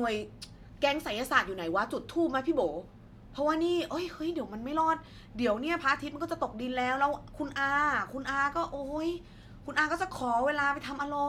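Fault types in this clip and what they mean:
No faults can be heard anywhere in this recording.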